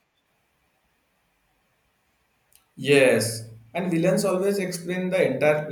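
No technical faults can be heard anywhere in the speech recording, and the signal holds steady throughout.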